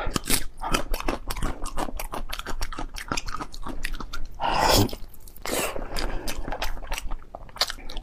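A brief jumble breaks the audio between 5.38 and 5.44 s. This is chunks out of order. A 20 ms chunk arrives two chunks late and plays after the two that should follow it. No audio goes missing. The sequence is simply scrambled for about 60 ms. The shuffle creates three hard joins where unmatched waveforms meet. The result is a short garbled moment around 5.4 s.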